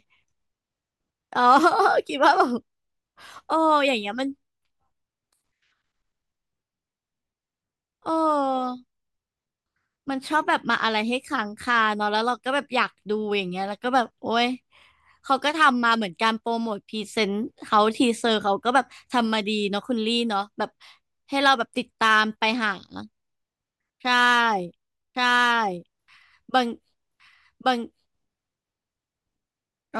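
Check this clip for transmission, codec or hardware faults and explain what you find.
One fault is audible: a doubled audio track running from 25.15 s to the end of the speech clip. At 25.15 s a second, full-band copy of the speech cuts in abruptly, trailing the original by about a second at roughly the same loudness. The likely cause is a second capture path or an edit leaving two copies out of step. Unlike an acoustic echo, there is just one copy, with no decay and no room colouring.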